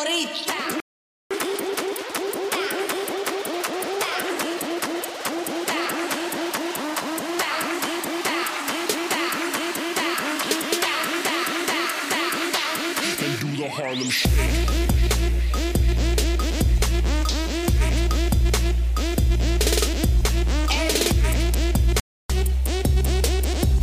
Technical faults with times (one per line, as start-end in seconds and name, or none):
0.80-1.31 playback stall
1.31-4.31 catch-up at higher speed
22.00-22.30 playback stall
22.30-23.82 catch-up at higher speed